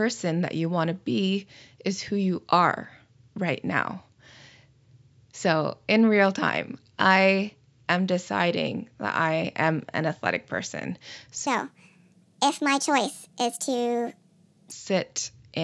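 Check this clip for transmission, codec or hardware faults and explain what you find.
One fault stands out: a wrong sample rate from 11.47 to 14.72 s. In that stretch the samples are played back faster than they were captured, with no conversion in between, so tempo and pitch rise together by the same factor. The speech runs 1.5 times too fast and sits about 7.02 semitones higher, which fits 16 kHz audio being played out at 24 kHz. The voice sounds hurried and chipmunk-like until the rate returns to normal.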